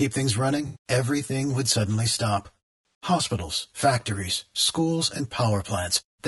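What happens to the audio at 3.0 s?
At 3.03 s, right after "everything would suddenly stop", there is AAC frame loss with concealment. About 40 ms of coded audio, consistent with two frames, went missing, and the decoder rebuilt the gap from the last good spectrum. The result is a brief smeared, noisy, phasey blip. On a spectrogram it shows as a thin vertical smudge of blurred, noise-like energy where the harmonic lines lose their definition. The waveform shows a short patch with a rough, irregular envelope.

That moment also carries channel delay (comb filtering), which runs through the whole clip. One channel lags the other by roughly 10 ms, so when the two are summed, shared content cancels at evenly spaced frequencies starting near 50 Hz. The speech sounds hollow and phasey. A spectrogram shows fixed horizontal dark stripes at regular intervals.

The speech is also rough and grainy, with noise filling the spaces between harmonics and a thin, synthetic-sounding top band. 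This likely comes from low-delay AAC compression (AAC-ELD) at a rate around 32 kbps. On a spectrogram the harmonics appear smeared, with speckled noise between them and a patchy, simplified upper region.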